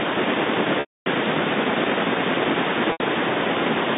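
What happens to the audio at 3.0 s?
Just before 3.0 s, from 2.92 to 3.00 s, there is a packet loss with pitch repetition. About 80 ms of audio goes missing, which fits four 20 ms packets. The receiver fills the gap by looping the last pitch period. That loop fades out over roughly 50 ms, so it sounds like a brief buzzy hold that dies into a short silence. The speech then returns through a quick cross-fade.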